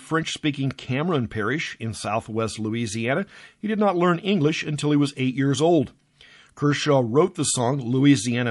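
Speech runs through the whole clip with a watery, swirling texture, a dulled top end and a metallic edge on s sounds. This is most likely MP3 compression at a low bitrate, around 48 kbps. With so few bits the encoder cuts the treble and lets weak frequency lines drop in and out from frame to frame. Unlike noise-reduction artefacts, the damage follows the codec's frame rhythm rather than the background level. At 4.77 s a pre-echo appears: a short hiss rises by about 11 dB for roughly 19 ms just before a sharp attack, which then sounds softened. The noise sized for the loud onset has spread back across its transform block, and the length points to long blocks of around 48 ms being kept instead of switching to short ones. What separates it from a click or a noise burst is that it sits only ahead of the attack and blends into it.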